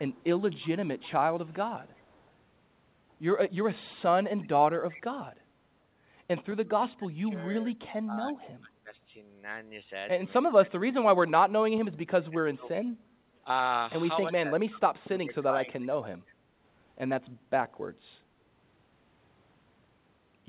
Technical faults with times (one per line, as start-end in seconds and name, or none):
0.13-2.30 echo leak
4.43-5.01 echo leak
6.64-8.93 speech suppressed in double talk
10.44-12.68 speech suppressed in double talk
14.30-16.05 speech suppressed in double talk